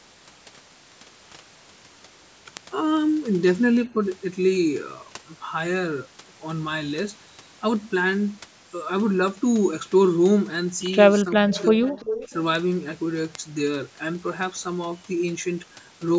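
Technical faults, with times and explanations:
0.17 to 16.15 s: word clock ticks. Sharp one-sample ticks recur roughly every 0.4 s, about forty in all, as an unlocked receiver's clock drifts about 50 ppm against the sender. Their steady spacing sets them apart from random crackle.
11.24 to 11.97 s: speech suppressed in double talk. Level dips in pieces, by up to about 20 dB, likely from an echo canceller ducking while both sides talked.
11.51 to 11.62 s: echo leak. A faint copy arrives 349 ms late at about 20 dB below the speech, likely loudspeaker pickup the canceller missed.
11.86 to 12.33 s: echo leak. The same 349 ms delayed copy returns longer and stronger, about 10 dB below the speech. The fixed delay separates it from room reverberation.
12.28 to 12.32 s: speech suppressed in double talk. A brief dip of about 10 dB, likely the canceller briefly turning the talker down during the returning echo.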